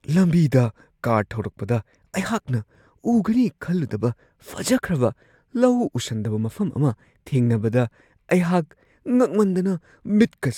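No technical faults are audible.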